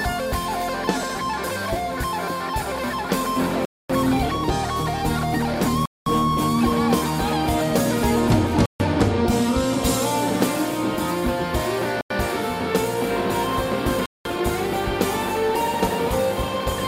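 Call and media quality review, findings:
Bluetooth stall, 3.65–3.90 s: interference likely delayed radio packets so the headphone buffer ran dry; 245 ms of silence, then sound resumes. Bluetooth stall, 5.86–6.06 s: likely the same retransmit wait; 207 ms dropout. Bluetooth stall, 8.66–8.80 s: link likely held packets again, buffer empty; 143 ms gap. Bluetooth stall, 12.01–12.10 s: likely brief retransmit delay; 92 ms cut to silence. Gaps shorten steadily across the four events.

Playback stall, 14.06–14.25 s: player likely starved of data or its output thread blocked, so nothing reached the output until it recovered. Symptom is a hard stop in mid-flow lasting 195 ms, longer in feel than a click and clearly audible as a hole in the sound. Output then restarts directly into the catch-up segment below rather than at plain normal pace.

Time-compressed catch-up, 14.25–14.43 s: after the stall the player drains its backlog by dropping short slices and cross-fading across the joins. 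Sound runs at 2.0x speed for 0.18 s with pitch held at its normal level, so it comes across as hurried rather than chipmunked. Normal pace returns at 14.43 s.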